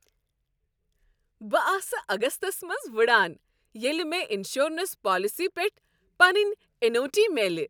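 Speech recording with no audible technical faults anywhere.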